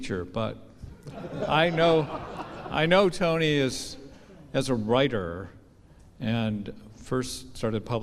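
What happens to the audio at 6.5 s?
Nothing goes wrong at 6.5 s; the audio plays through that moment intact, with no dropout, click or other fault.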